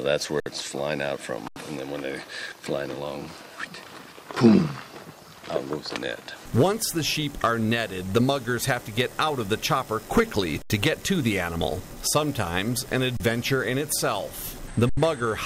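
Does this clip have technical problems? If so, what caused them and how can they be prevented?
Yes: underrun with held sample at 0.40, 1.48, 10.62, 13.17 and 14.89 s, lasting 60, 80, 80, 32 and 80 ms. The output buffer ran dry and the converter froze on its last value, drawing a flat line on the waveform and a blank vertical strip on the spectrogram. Playback then resumes where it stopped, with nothing lost, so restarts are soft. Larger buffers or higher-priority audio threads prevent this.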